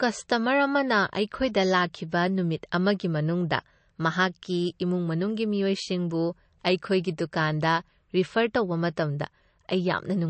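From start to finish the speech carries plainly audible MP3 compression damage, likely from encoding at a low bitrate, which fits something around 36 kbps. Nothing is present above 8.3 kHz, so the treble is cut off at a fixed point and sibilants lose their top edge. With too few bits available, weaker frequency lines drop in and out between frames, producing a watery, swirling texture with metallic chirps on s sounds and smeared consonant attacks.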